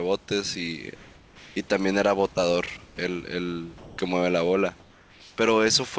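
From 0.96 to 1.56 s, the room background turns into a smooth, featureless hiss about 2 dB quieter, and it happens again, more briefly, from 2.86 to 2.98 s, where the level sinks by about 7 dB. The likely cause is comfort noise in place of the background: during these pauses the sender stopped transmitting, and the receiver filled the gap with synthetic noise roughly matched to the real background, which sits about 30 dB under the speech.

At 3.78 s the speech breaks off, and about 110 ms of it gives way to comfort noise until 3.98 s. This is likely sound dropped by the voice detector: the sender judged part of the sound to be background and stopped sending, so the receiver played comfort noise over the missing part.

From 4.80 to 5.38 s the detailed background once more turns into bland synthetic noise, about 3 dB lower, which fits another spell of comfort noise standing in for the pause.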